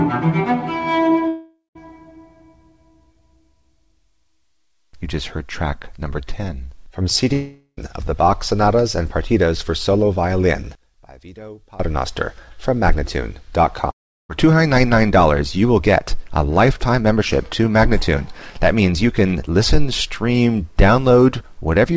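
At 1.28 to 1.78 s, 7.33 to 7.80 s and 13.91 to 14.32 s, the sound turns into a fading buzz that ends in silence, then resumes with roughly 0.4 to 0.5 s skipped. That missing stretch, rather than a brief click, points to a likely long network dropout.

From 10.75 to 11.80 s, the sound drops by about 22 dB, but it never stops. That is the sign of one channel inverted, likely cancelling the shared content in a mono sum, unlike a dropout's gap. Throughout, G.722 band-limiting leaves nothing above 8 kHz.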